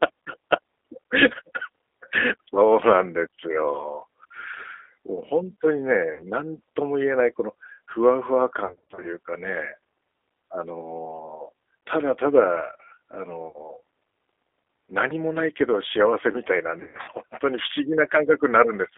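Throughout the speech, the G.729 codec (the G.729A variant at 8 kbit/s) rebuilds each 10 ms stretch from a vocal tract filter, a pitch predictor and a handful of pulses. With nothing kept outside roughly 300 Hz to 3.6 kHz, the voice sounds narrow and telephone-like. The coarse excitation adds a plainly audible rough, slightly synthetic texture to every syllable.

VoIP packet loss concealed by the speech codec strikes four times. Each time, the decoder fills the gap by extrapolating from its last pitch and filter while lowering the gain. At 6.13 to 6.24 s about 60 ms is missing, and the sound smears into a brief buzzy tone or coloured noise that sags in level. From 8.65 to 9.08 s about 230 ms goes missing in runs of up to 40 ms spread over 380 ms, so the voice flutters between weak, smeared stretches. At 13.48 to 13.60 s a 70 ms gap gives another short fading tone or noise. From 16.80 to 17.10 s about 200 ms is lost over 280 ms, including a 60 ms run. 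The voice stays weak and distorted until the decoder recovers.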